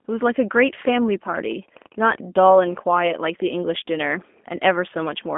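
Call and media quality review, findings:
G.729 codec, full clip: speech rough, slightly synthetic, band-limited; spectrogram shows nothing above 3.6 kHz, energy between 200 Hz and 3.5 kHz, which fits G.729A at 8 kbit/s rebuilding each 10 ms frame.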